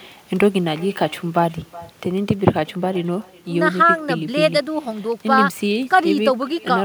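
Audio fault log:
throughout, echo with no canceller: the far end's loudspeaker feeds back into its microphone and nothing strips it out, so the speech returns after the network round trip, roughly 0.4 s late, as a quieter, thinner copy about 23 dB below the original.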